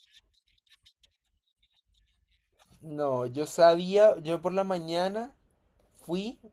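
Nothing here stands out as a fault, with the speech coming through Opus voice compression at about 20 kbps in its hybrid, fullband setting and the coding leaving only a light touch on the sound.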